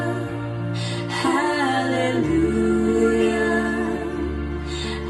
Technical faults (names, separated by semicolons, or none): none